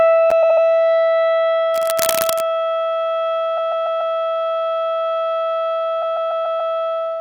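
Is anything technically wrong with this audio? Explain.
Yes, there are three kinds of fault in this music.

At 0.30 s there's a block of digital silence, a roughly 11 ms dropout that fits a 512-sample buffer not being filled in time. It cuts in and out with no fade, so you hear a sharp tick.

Repeated frames show up three times. From 0.42 to 0.64 s a 72 ms chunk plays three extra times. From 3.57 to 4.14 s a 144 ms chunk repeats four times, and from 6.01 to 6.73 s the same length repeats five times. Each one is the decoder replaying the same stretch, so it sounds like a stutter.

From 1.74 to 2.46 s there's cable scratch noise: dense, uneven crackly rustling almost as loud as the music, most likely from a worn cable or connector being moved.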